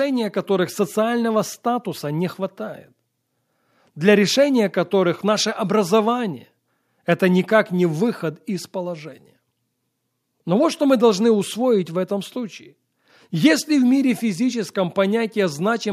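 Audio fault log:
No faults heard anywhere in this speech recording.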